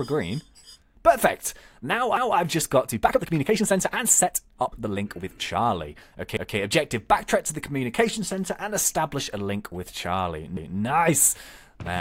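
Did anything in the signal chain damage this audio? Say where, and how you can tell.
Yes. From 2.84 to 5.70 s the audio turns rushed at about 1.42 times speed while pitch stays put. This time-stretched section is likely from processing software shortening a segment. On a spectrogram, harmonic lines keep their frequencies while events squeeze closer together.

Overlapping chunks appear at 6.37 s and 10.57 s. Each replays 200 ms, heard as a stutter at the joins between 4 s chunks. This points to the buffer or streaming stage, where each chunk began before the last ended. The waveform shows a duplicated 200 ms stretch with a discontinuity at each join.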